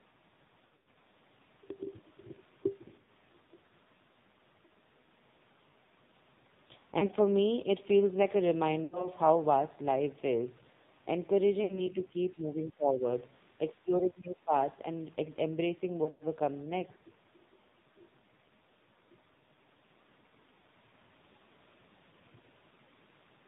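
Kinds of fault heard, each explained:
AMR narrowband mobile codec: speech stops at 4 kHz and sounds buzzy and synthetic, which fits a low mode near 5.9 kbps. Unlike plain filtering, the voice itself sounds rebuilt.
Lost AMR speech frames: at six points the voice smears, repeats its last pitch and fades briefly, rather than clicking or cutting to hard silence as a dropout would.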